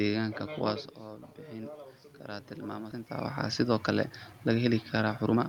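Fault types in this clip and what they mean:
Automatic gain rising: From about 1.01 s to 3.39 s the speech and the room noise behind it swell together, climbing by about 7 dB over more than two seconds. The level at the microphone had dropped by about 11 dB, in part because the talker moved away around 0.5 s, so the automatic gain control raised its gain step by step to compensate. The noise floor rises in lockstep with the speech, which shows that the system, and not the talker, is doing the lifting.
Skip ahead: At 2.91 s the speech jumps abruptly forward, with no silence or fill between the two sides. About a second of audio is missing and the edges are butted almost directly together. Later audio was already queued, so a backlog of roughly a second was discarded at once, most likely by an overflowing jitter buffer, cutting the delay in a single step. The talker moving near 3.0 s adds a level shift close to the same moment.
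Jitter buffer speed-up: From 3.64 s to 5.40 s the speech runs noticeably quicker, at about 113% of its normal rate, while the pitch stays the same. The delivery sounds hurried. The jitter buffer was still holding more audio than its target, so the receiver repeatedly cut out short pitch-period-sized slices, roughly 200 ms in total over this stretch, to drain the excess delay without shifting the pitch.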